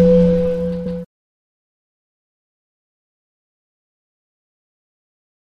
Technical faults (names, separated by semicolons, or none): repeated frames